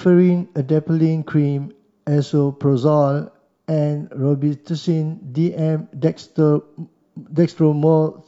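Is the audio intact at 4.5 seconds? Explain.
Yes, at 4.5 seconds the speech plays through intact, with no dropout, click, distortion or other fault audible at that moment.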